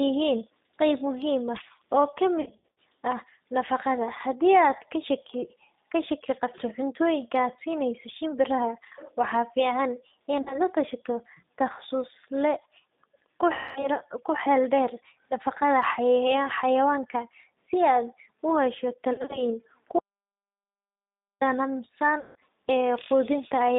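From start to finish the speech sounds slightly rough and synthetic, thin and boxed in, with the codec damage plainly audible. Nothing reaches below about 150 Hz or above about 3.7 kHz. This is the G.729 codec, an 8 kbit/s telephony coder. It does not carry the waveform itself. It rebuilds the voice from a vocal-tract filter, a pitch predictor and a few pulses in each 10 ms frame, so fine detail is replaced by an approximation.

At 2.41–2.77 s the voice smears into a stretched buzzy tone or coloured noise that sags in level and then recovers unevenly. This happens again at 10.41–10.59 s, 13.53–13.89 s and 19.13–19.41 s. It is VoIP packet loss concealed by the speech codec. The decoder fills missing frames by extrapolating its last pitch and filter and fading the gain. At 2.41 s about 230 ms of audio is missing, scattered over 360 ms, with the longest gap 70 ms. At 10.41 s about 50 ms is missing. 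At 13.53 s about 230 ms is missing. At 19.13 s about 120 ms is missing across 160 ms. Because each frame is predicted from the one before, the voice stays weak and distorted for a moment after each gap.

From 19.99 s to 21.41 s the sound cuts out completely for about 1.42 s. Nothing is heard, not even background tone, and then the audio returns mid-flow. This is an audio dropout to silence. The likely cause is that the input was lost while the recording carried on writing silence, so whatever happened during that stretch is gone.

At 22.20–22.36 s there is one more concealment event. About 160 ms is lost, and it turns into the same fading buzz or coloured noise.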